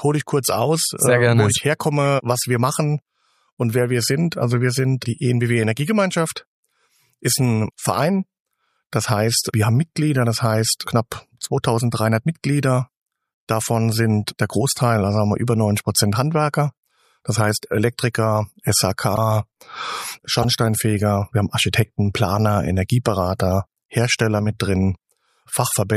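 Corrupt frame decoded at 2.05, 18.13, 19.16, 20.42–20.44 and 22.27 s: damaged compressed frames played anyway, giving brief chirps or blips, loudest near 19 and 20 s and faint at 18.13 s, seen as short misplaced vertical streaks.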